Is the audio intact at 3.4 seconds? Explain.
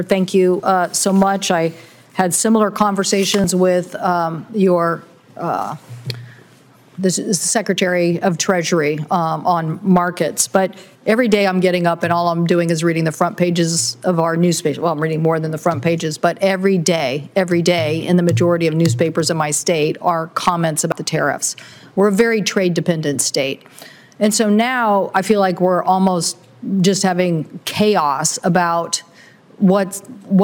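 No. At 3.44 s the sound jumps ahead, most likely a dropped buffer (overrun): roughly 40 ms was overwritten before being read, and the two sides were spliced together. Unlike a dropout, no silent gap appears.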